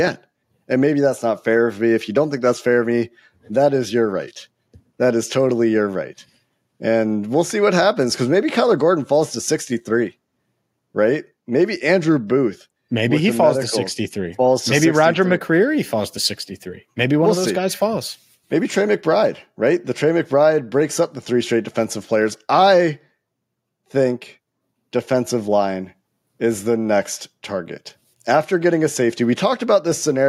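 No technical faults can be heard anywhere in this speech recording. There are no events to place in time, so there is nothing to describe in sequence.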